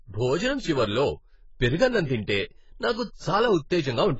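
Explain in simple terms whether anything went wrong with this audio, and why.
Yes, the speech sounds dull and smeared throughout, with nothing above 7.7 kHz. The likely cause is heavy AAC compression, which discarded detail to shrink the file.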